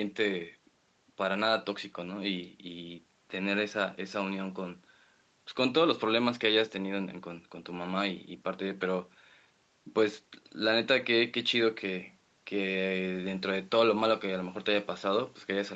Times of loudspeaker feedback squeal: none

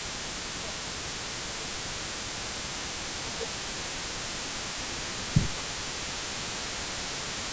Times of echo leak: 0.00-7.52

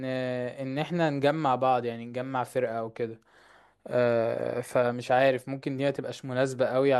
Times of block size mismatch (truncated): 4.33-5.30

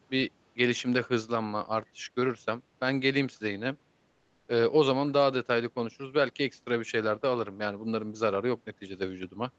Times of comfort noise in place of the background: 4.11-4.47

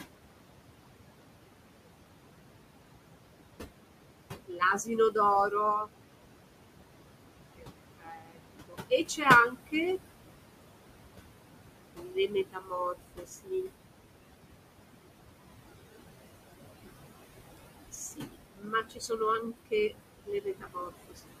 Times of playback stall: none

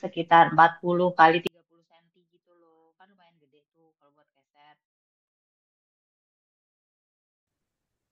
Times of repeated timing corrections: none

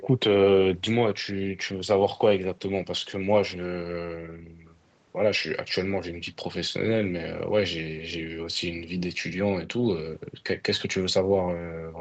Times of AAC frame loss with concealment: none

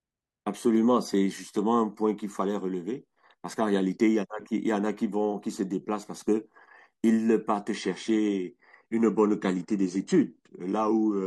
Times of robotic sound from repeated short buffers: none

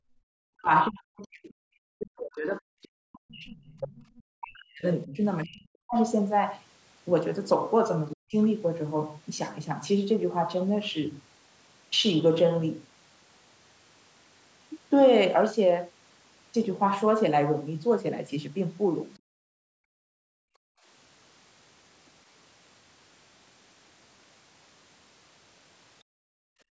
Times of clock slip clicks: none

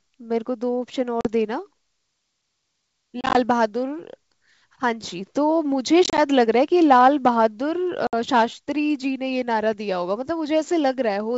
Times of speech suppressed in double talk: none

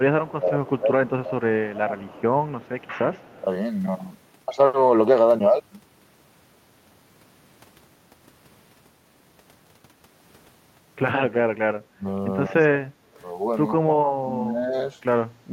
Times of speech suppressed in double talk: 0.00-3.23, 11.88-12.72, 13.77-14.75

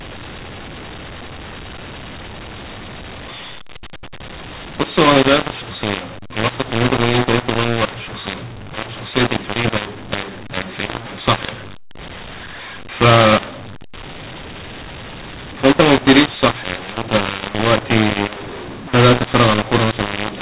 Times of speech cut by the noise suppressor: none

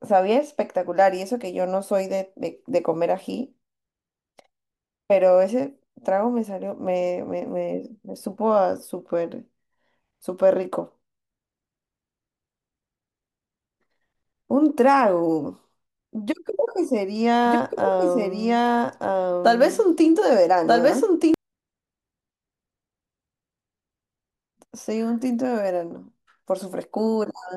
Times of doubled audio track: 17.46-21.34

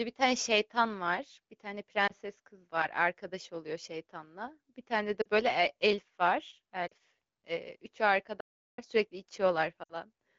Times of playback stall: 8.40-8.78

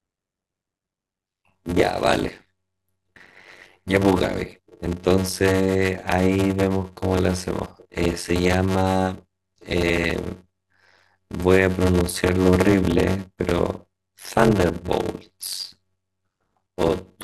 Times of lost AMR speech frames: none

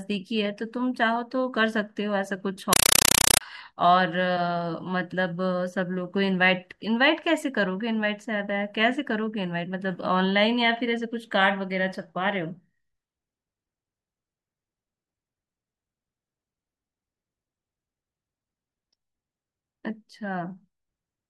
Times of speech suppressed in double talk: none

